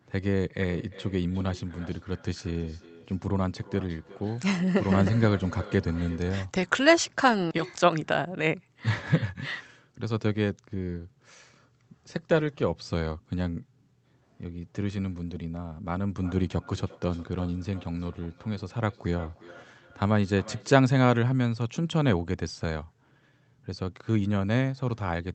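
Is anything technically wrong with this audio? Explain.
Yes, there is feedback echo between two devices, from 0.66 to 6.48 s and again from 16.22 to 20.85 s. Two devices on the same call share the room, so one replays what the other's microphone sent, and that microphone recaptures it beyond its own echo canceller's reach. The speech returns roughly every 0.4 s as thinner, ringing repeats, peaking at about 19 dB below the speech in the first stretch and about 21 dB below in the second.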